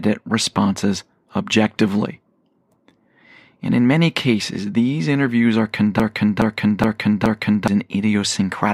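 Speech with a broken-record loop from 6.00 to 7.68 s: a 420 ms fragment repeats exactly four times, unlike echo, since nothing decays and the missing audio never returns, likely a stalled stream.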